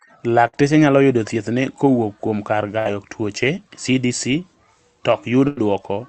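A burst of packet loss hits at 0.47, 2.79 and 5.47 s. Lost audio is bridged by extending the last sound and fading it for 56, 63 and 93 ms. Each gap sounds like a brief held buzz or hiss, then speech skips ahead.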